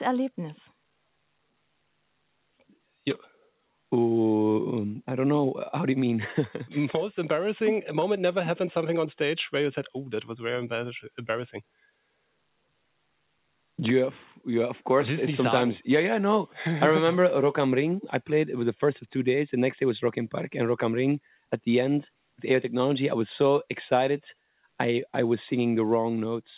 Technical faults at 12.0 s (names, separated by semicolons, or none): none